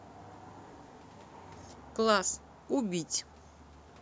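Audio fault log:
No faults are audible in the clip. The speech carries the shape of a call microphone's processing, with the lowest bass trimmed and nothing above 8 kHz.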